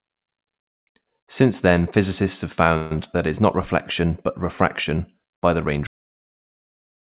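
Call audio freeze from 2.77 to 2.92 s in this speech recording: the sound is held as a fading buzz or hiss for about 140 ms, likely because packets arrived late and the jitter buffer ran empty. The speech then resumes where it stopped, so a gap is inserted and nothing is lost. Cut-off end at 5.87 s: the audio stops mid-sound and falls straight to digital silence with no decay for the final 1.3 s, because the last buffers were never written or played. Throughout, nothing is heard above 4 kHz, which fits G.711 mu-law call coding at 64 kbps.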